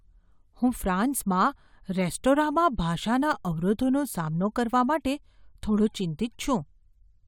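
No technical faults can be heard anywhere in the speech recording. Nothing in the audio calls for a timestamp or a closer look.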